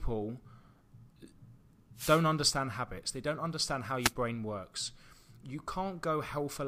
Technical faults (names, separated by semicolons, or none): wireless microphone noise hit